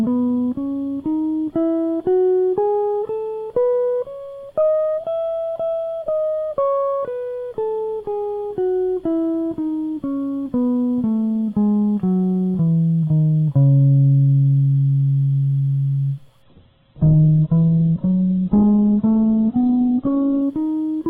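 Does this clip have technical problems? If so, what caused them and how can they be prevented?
Yes. From 16.42 to 20.42 s the music turns dull and watery, with nothing above 4.2 kHz, then snaps back with no gap. This is an adaptive stream switching to a lower bitrate, consistent with a drop from roughly 64 to 8 kbit/s. A steadier connection or a larger playback buffer would keep the stream from stepping down.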